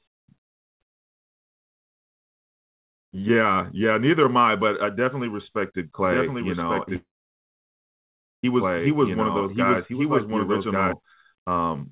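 From 6.04 s to 10.93 s, the likely cause is a second capture of the same speech through a slower path, which mixes a copy back in about a second behind the original. This is a doubled audio track. The copy is roughly as loud as the original and shares its narrowband call sound, with nothing above 4 kHz. It has no reverberant tail. It cuts in abruptly at 6.04 s and stops just as abruptly at 10.93 s, so the speech overlaps itself like a dry, full-strength echo.

Inside that stretch, from 6.96 s to 8.44 s, a call audio freeze occurs, likely because packets were held up in transit until the jitter buffer ran dry. The receiver briefly stretches the last sound into a fading buzz or hiss. The audio then drops to silence for about 1.39 s of the 1.47 s gap. When the packets arrive, playback resumes where it stopped with nothing lost, leaving everything afterwards 1.47 s later than before.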